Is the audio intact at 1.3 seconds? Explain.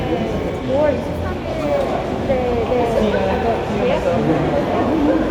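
Yes, at 1.3 seconds the sound plays through cleanly, with no dropout, click, distortion or other fault.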